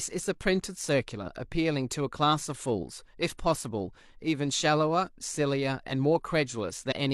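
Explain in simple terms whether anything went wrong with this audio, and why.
Near the end, around 6.88 to 6.92 s, compressed frames were skipped: the speech jumps ahead about a tenth of a second.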